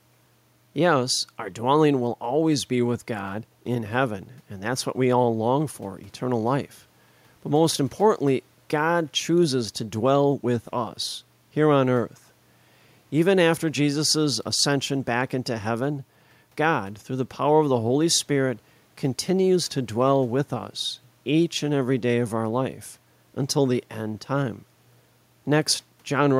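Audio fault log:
Nothing to log here, as the speech comes through with no faults to be heard anywhere in the clip.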